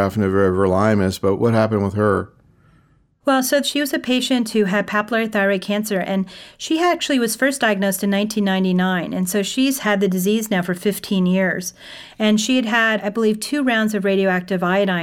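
Listening to the speech recording, nothing stood out as a technical problem at any point.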